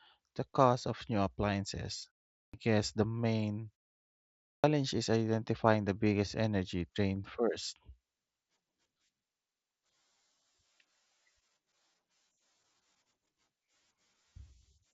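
At 2.4 s, just after "cost of new appliances", the speech re-enters abruptly on "guess the main", with its opening sounds missing. This is a clipped start after a pause. The output path went idle during the short 0.36 s gap and needed about 135 ms to wake, so the first part of the phrase never reached the speaker. The same happens at 4.5 s after a longer 0.81 s pause. About 138 ms is lost, and "is identifying the biggest" begins hard out of silence.

At 7.15 s, right after "identifying the biggest energy", there is a single concealed Bluetooth headset packet loss. One brief packet, about 7.5 ms of audio, failed to arrive, and the receiver filled the hole by repeating the best-matching stretch of the preceding waveform. Because only one packet went missing, the patch is nearly inaudible, with none of the held buzz that longer runs of loss produce.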